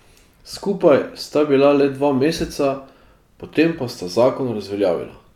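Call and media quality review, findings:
No audible faults found in the speech recording; nothing to log.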